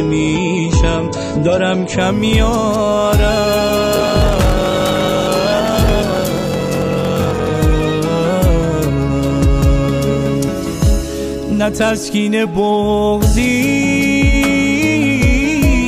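From 0 to 2.0 s the adaptive stream is starting at a low bitrate. Nothing is present above 8.3 kHz, which fits roughly a 32 kbit/s MP3 rendition. At 2.0 s the treble returns abruptly, consistent with a step up to about 128 kbit/s. Unlike a dropout, this switch leaves no gap.

From 3.94 to 7.50 s a block size mismatch (padded) occurs. Each block is shorter than what the next stage reads, and the remainder of every block is filled with zeros. This produces a steady 43.1 Hz buzz, which fits a 1024-sample read block. The sound also runs slower, at 0.861 times normal speed. Unlike a tape-style slowdown, the pitch stays about normal.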